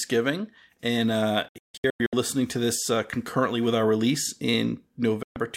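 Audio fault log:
1.48–2.13 s, digital broadcast dropout: the receiver lost corrupted frames and muted, leaving several short holes totalling 448 ms, the longest 160 ms, with abrupt 3 ms fades.
5.23–5.37 s, digital broadcast dropout: the receiver again muted on failed frames, cutting the speech for 128 ms with a 3 ms fade before the sound returns.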